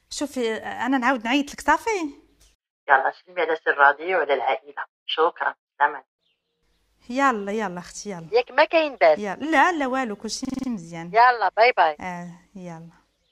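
From 10.45 to 10.68 s a fragment of about 46 ms repeats exactly five times, a brief rattling stutter at 21.5 Hz. This is a system hang loop: playback froze while the hardware kept replaying one ring buffer, which fits a 2048-sample buffer. Almost no audio goes missing.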